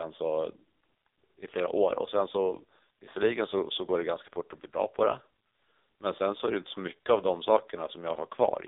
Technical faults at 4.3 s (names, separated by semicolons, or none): AMR narrowband mobile codec